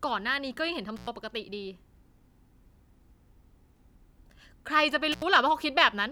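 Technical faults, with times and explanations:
0.96–1.07 s and 5.12–5.22 s: intermittent contact. The speech drops out abruptly for 99 ms, then 77 ms, with a crackle at each edge and faint hiss in the gap. A loose plug or cable briefly opened the signal path before contact returned.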